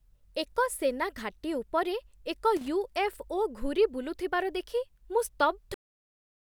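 A short burst of irregular crackle and scratching breaks into the speech from 2.57 to 2.68 s, lasting about a tenth of a second. This is loose connector crackle: a worn or dirty contact somewhere in the cable path is making and breaking as it shifts, so the signal is chopped on and off in quick succession, and any DC present on the line turns each break into a pop.

At 5.74 s the audio stops dead in the middle of a sound and falls straight to digital silence, with no natural decay, for the remaining stretch of the clip. This is a cut-off end: the final buffers of the recording were never written or played out, so the signal halts abruptly rather than ending where the speaker finished.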